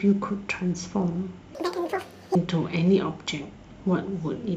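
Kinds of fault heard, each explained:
Audio read two samples at a time (double speed): from 1.55 to 2.35 s the speech plays as if each pair of samples were one frame, as when the reader assumes two channels or double-width samples. It runs at twice the speed and an octave (12 semitones) higher. On a spectrogram the harmonics there double their spacing. The waveform looks squeezed in time.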